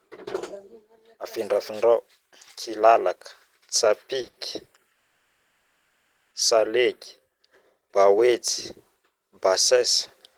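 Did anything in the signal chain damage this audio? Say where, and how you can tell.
Yes, at the network stage. Three short stalls from late packets land back to back at 4.21, 4.25 and 4.29 s, each holding the speech a touch too long with a faint buzz. The jitter buffer ran dry, the receiver stretched the last sound for 20, 20, then 40 ms, and resumed where it left off.

Shortly after comes a call audio freeze from 4.93 to 6.33 s. The sound turns into a held, fading buzz for about 1.4 s, then the speech picks up with nothing skipped. The likely cause is packets stuck in transit, leaving the receiver to fill the wait itself.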